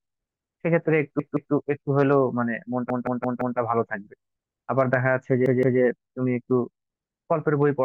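At 1.20 s, 2.90 s and 5.46 s the speech sticks in a repeated buffer: the playback device ran short of new audio and replayed its last block, each about 171 ms long, which fits an 8192-sample buffer. The same slice sounds again twice, then four times (to 3.58 s), then twice, each repeat joined by a hard seam, and the speech resumes with nothing skipped. Unlike an echo, the repeats don't decay, and unlike a dropout, no silence or gap appears.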